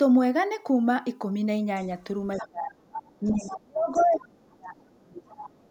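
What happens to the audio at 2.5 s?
Around 2.5 s the speech is pulled down hard, a case of speech suppressed in double talk lasting from 2.40 to 2.92 s, about half a second in all. Both ends were likely talking at once, and the echo canceller, unable to separate its own talker from the loudspeaker return, attenuated everything. The level sinks by around 30 dB at its deepest. On the waveform the envelope collapses into a narrow band, and a spectrogram shows the energy thinning.

Just before that, from 2.32 to 2.48 s, there is a brief burst of the other side's voice leaking through, sitting roughly 15 dB below the talker. The device was likely playing the far end on a loudspeaker that the microphone picked up, with the canceller leaving some of it behind. It sounds like a faint fragment of a second voice. A spectrogram shows a weak, separate set of harmonics overlapping the start of the dip.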